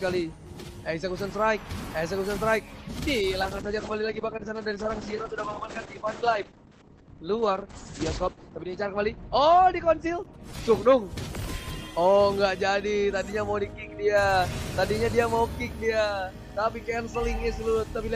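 A faint, steady ticking runs through the whole recording at about ten clicks per second, sitting well below the main sound, roughly 35 dB down. This is Wi-Fi interference. The clicks repeat every 102.4 ms, the beacon interval of a nearby Wi-Fi radio. The audio circuit picks up and rectifies those radio bursts, turning each one into an audible tick that stays regular from start to finish.

From 3.43 s to 12.19 s the sound turns coarse and muffled, with a rough, watery texture and no top end. This is a call bitrate drop. The call's bandwidth estimate fell, so the encoder was told to spend far fewer bits. The degradation fits a fall from around 48 kbps to around 9 kbps. At its worst the coding stays crude for about 5.2 s. Meanwhile the audio bandwidth shrinks from 20 kHz to 8 kHz until the bitrate recovers.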